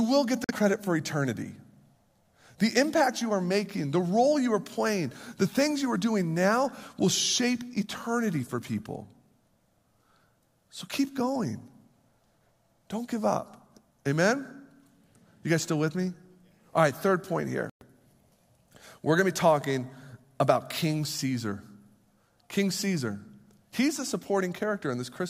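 Bluetooth dropouts cut this speech clip twice: 0.44 to 0.51 s, between "will get the" and "for eternity", and 17.70 to 17.83 s, after "right third point". Each is a silent gap, likely from packets reaching the headphones too late and being discarded. The speech resumes further on, as if it had kept playing, which fits about two lost frames in the first gap and five in the second.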